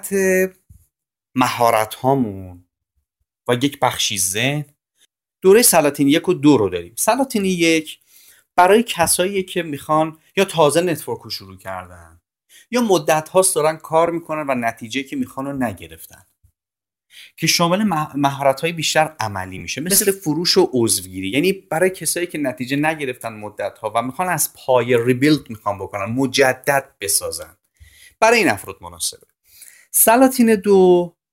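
At 14.07 s and from 19.58 to 19.61 s, lost LE Audio frames (7.5 and 22.5 ms, fitting one and three LC3 frames) are concealed with the last spectrum under random signs. The speech briefly smears into noise, and a spectrogram shows harmonics blurring into short broadband patches.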